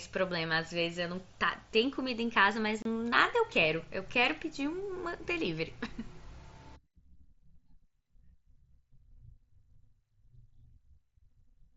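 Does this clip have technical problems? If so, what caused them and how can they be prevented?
Yes. Unconcealed Bluetooth headset packet loss leaves a 30 ms hole from 2.82 to 2.86 s, which fits four lost packets replaced by silence. The waveform drops flat with abrupt edges, and a spectrogram shows a thin vertical gap. Keeping the headset near the phone, or enabling packet loss concealment, prevents it.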